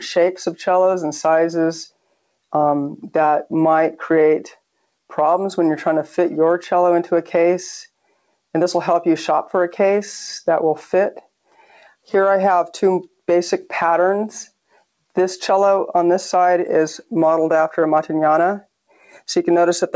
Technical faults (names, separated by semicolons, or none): sound cut by the noise suppressor